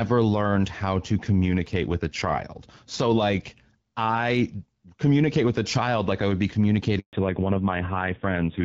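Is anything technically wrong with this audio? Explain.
Yes, the call suffers two linked faults near the end.

From 6.99 to 7.13 s there is a handover gap. Right after "like I would be", the phone switched the call to another network link, and no speech frames got through while it did. The voice fades out within a few tens of milliseconds and falls silent for 140 ms until the new connection starts carrying audio, so whatever was said in that window is gone.

From 7.13 s to the end there is a fallback to narrowband. After the handover, the call no longer runs on the HD Voice wideband codec, whose coding damage is light before this point. It drops to an older narrowband codec, and the low-rate roughness fits AMR-NB at about 5.9 kbit/s. Nothing above 4 kHz survives, so the voice abruptly loses its crispness and airy consonant detail, sounding muffled, duller and rougher.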